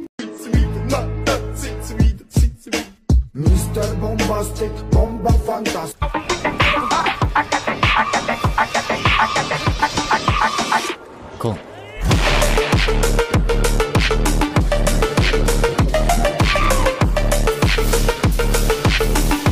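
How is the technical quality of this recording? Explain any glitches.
No glitches can be heard anywhere in the recording, and the signal stays technically intact throughout.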